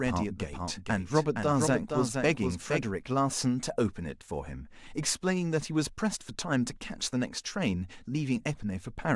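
From the very start until 2.86 s there's a doubled audio track: a second copy of the speech trails about half a second behind, roughly 5 dB quieter, dry and full-band, then cuts off abruptly. Most likely the signal was captured twice through a slower path.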